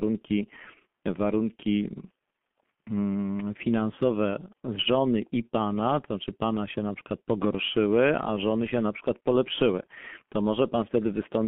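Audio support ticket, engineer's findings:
Muffled, hoarse speech start to end, nothing above about 3.4 kHz and thin below 150 Hz. Looks like the G.723.1 codec on the line. Consonants smeared, voice grainy. Sound points to its higher-rate mode, around 6.3 kbit/s. Heavy damage here: long 30 ms frames and a slow-updating voice model can't track fast changes, so transitions blur. Narrowband telephone filtering on top cuts the top end.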